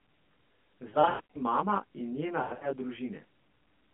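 Throughout, channel delay (comb filtering) gives a rough, slightly doubled colour. One channel trails the other by roughly 20 ms, so the mono sum cuts evenly spaced notches from around 30 Hz upward. The notches stay fixed, unlike a sweeping flanger.

From 0.90 to 1.37 s, lost AMR speech frames break up the narrowband mobile sound. The gaps are scattered across about 0.44 s, the longest run 100 ms. The decoder repeats the last good frame, so the sound smears into a drawn-out warble and fades, rather than clicking out as a plain dropout would. The voice recovers weakly just before "mama in". A second burst of lost AMR speech frames runs from 2.42 to 2.70 s, with the same repeat-and-fade smearing over about 0.2 s.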